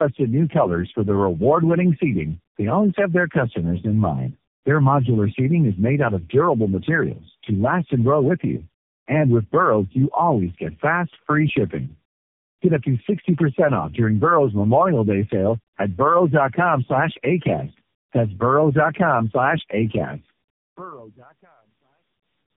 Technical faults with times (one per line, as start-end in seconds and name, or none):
0.00-22.57 tandem speech coding